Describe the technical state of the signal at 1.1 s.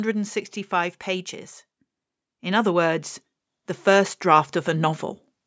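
At 1.1 s the speech is intact, with only the normal band limit of call microphone processing, which leaves nothing above 8 kHz.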